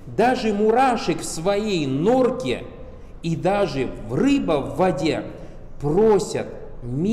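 No technical faults can be heard anywhere in the clip.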